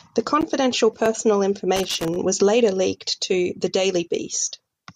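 From 1.76 to 2.16 s the speech breaks into an irregular burst of scratchy crackle. This is loose connector crackle: a worn or dirty contact repeatedly made and broke as it shifted, chopping the signal and adding pops from any DC on the line.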